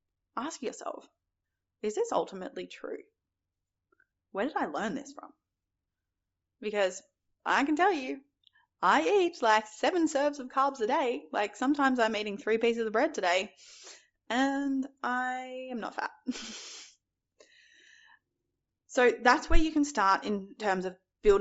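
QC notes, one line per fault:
Throughout: Bluetooth LC3 compression. The speech carries a plainly audible breathy, grainy edge, with the upper frequencies sounding hissy and smeared. The likely cause is LC3 coding, which points to a rate near 32 kbps with 7.5 ms frames: at that rate the encoder zeroes much of the upper spectrum and fills the gaps with noise, so fine high detail is swapped for texture that doesn't follow the speech.
4.10 to 4.11 s, 16.02 to 16.06 s: lost LE Audio frames. Short noisy smears break the speech, about 15 ms just before "where did I learn" and about 30 ms right after "and I am not". LE Audio frames went missing and the LC3 decoder repeated the last spectrum with its signs scrambled. That gives a brief rough hiss in place of clean sound, and it is longer in the second dropout.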